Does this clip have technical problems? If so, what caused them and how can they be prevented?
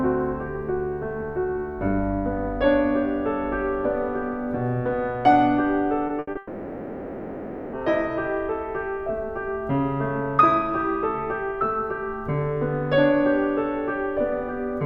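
Yes. Short concealed packet loss occurs twice, at 6.07 to 6.11 s and 6.31 to 6.37 s. Packets missed the decoder, and the receiver extrapolated the preceding music for 20 ms and 40 ms before blending back, leaving a brief smear or wobble in the music. A larger jitter buffer with forward error correction would prevent this.

A burst of packet loss spans 6.19 to 6.29 s. Consecutive packets arrived too late or not at all, so the receiver stretched the last sound over 80 ms while fading it, producing a held buzz or fading hiss before the music resumes further on. Packet redundancy and a more stable network path would prevent this.

A long network dropout runs from 6.37 to 7.75 s, likely caused by the connection stalling entirely. The receiver kept concealing across all 1.36 s without falling silent, so the music turns into a fading synthetic continuation and then returns with that stretch missing. 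A reliable wired connection or link failover would prevent this.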